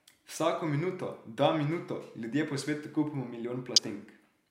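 At 3.76 to 3.79 s there's damaged data in the compressed stream: the decoder hits corrupt frames, loses sync and spits out a quick glitch before recovering.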